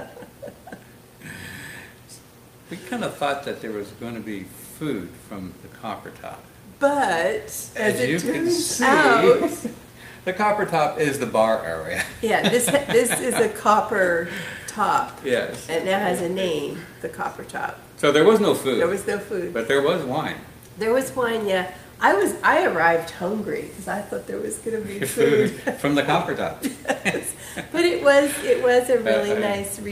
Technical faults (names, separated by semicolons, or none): none